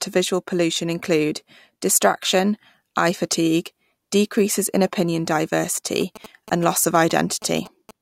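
From about 6.01 s to 7.91 s you get GSM signalling bursts: a nearby 2G phone doing its handshaking, with the audio circuitry rectifying the radio pulses. It comes through as a galloping dit-dit-dit of short 217 Hz buzzes, sitting roughly 15 dB under the speech.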